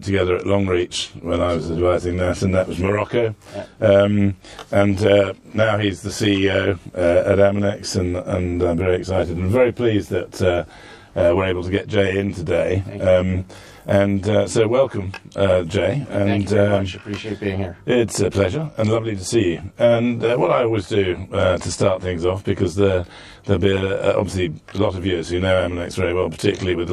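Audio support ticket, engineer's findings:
Channel delay (comb filtering), throughout: rough, slightly doubled sound. One channel roughly 20 ms late, summed to mono. Spectrogram shows fixed, evenly spaced notches, first near 30 Hz.

Sample clock jitter, throughout: fine hiss and roughness on loud, bright passages, gone in silence. Converter clock wander, well under a microsecond. Spectrogram shows a broadband haze about 55 dB below signal, tracking level.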